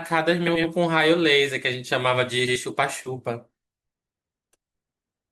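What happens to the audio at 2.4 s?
At 2.40 s the speech flutters briefly until 2.57 s: frames out of order. Two adjacent 80 ms blocks play swapped, without losing time.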